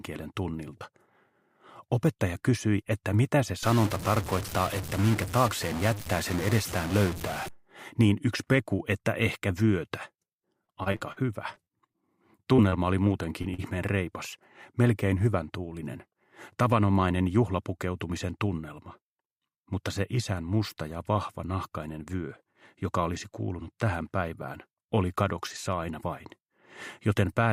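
From 3.63 to 7.48 s there's a grainy or buzzy distortion riding on the audio, with hiss creeping into the quieter moments, which is likely a stuck bit: one data bit pinned high or low so roughly half the samples land off by that bit's weight. Then between 10.41 and 11.18 s you get repeated packet loss with that robotic sound: six holes totalling about 180 ms, the longest 45 ms, each patched by stretching the previous audio, so about a fifth of the stretch is filler and it goes choppy. Right after, there's a run of short concealed packet loss at 11.54, 11.64, 11.93, 12.56, 12.70, 13.42 and 13.54 s. Each drops about 20 ms, except the last at 40 ms, and each gets smoothed over with continued sound, leaving brief smears or wobbles.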